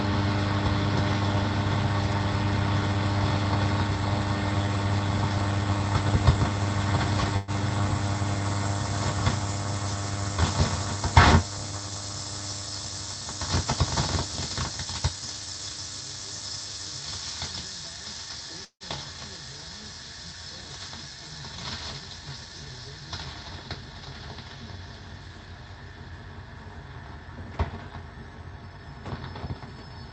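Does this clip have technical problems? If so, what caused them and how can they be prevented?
Yes. From 7.36 to 7.51 s there's a burst of packet loss: the receiver stretches the last bit of sound into a fading buzz or hiss for about 110 ms, then jumps ahead past roughly 120 ms that never arrived. A bigger jitter buffer or in-band FEC would help ride out short bursts like that.

At 18.65 to 18.83 s the sound smears into a fading tail, drops to silence, then resumes with about 160 ms gone, likely a long network dropout. A steadier network link, like wired instead of Wi-Fi, is the main way to avoid that.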